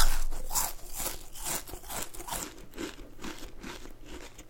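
No technical faults occur at any point in this sound recording.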